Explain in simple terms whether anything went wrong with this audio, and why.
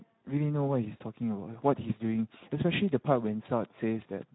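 The speech has been squeezed through the Speex codec from start to finish. That older voice-chat codec saves data by rebuilding the voice from a rough model, so it comes out noticeably hoarse and grainy, and everything above about 3.9 kHz is gone, leaving it muffled.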